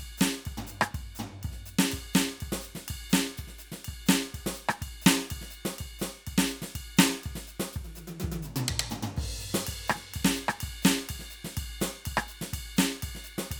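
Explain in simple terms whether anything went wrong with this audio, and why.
Listening to this music, nothing stood out as having gone wrong.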